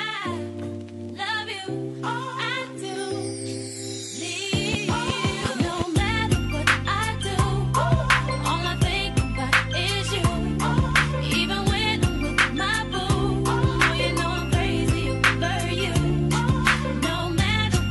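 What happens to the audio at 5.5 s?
Nothing goes wrong at 5.5 s; the audio carries on intact through that moment, with no dropout, click, distortion or other fault.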